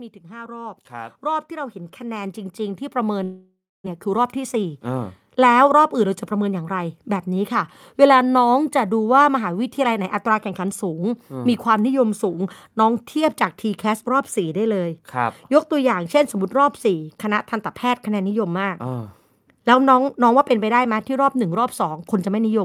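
Speech with three faults. Automatic gain rising runs from 0.21 to 11.6 s, lifting voice and background together by about 16 dB; unlike a level fade, the noise floor swells along with the voice. From 3.23 to 3.88 s the sound dissolves into a fading buzz, then about 0.27 s of silence, and roughly 0.4 s never returns. This points to a likely long network dropout rather than a brief packet-loss glitch, because of the length of the gap and the lost audio. A jitter buffer speed-up follows from 3.98 to 6.79 s. The audio plays at about 107% speed with pitch unchanged, trimming about a fifth of a second of built-up delay, so it sounds hurried rather than higher-pitched.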